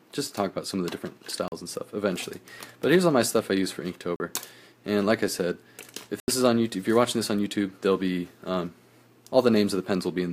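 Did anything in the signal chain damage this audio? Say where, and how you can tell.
Yes. The damage is at the driver or buffer stage: three blocks of digital silence, 40 ms at 1.48 s, 40 ms at 4.16 s, and 80 ms from 6.20 to 6.28 s. Each one cuts the sound to silence and back with no fade, leaving a short hole. The 80 ms gap is exactly twice the 40 ms ones, which points to whole buffers going unfilled when the output deadline passed.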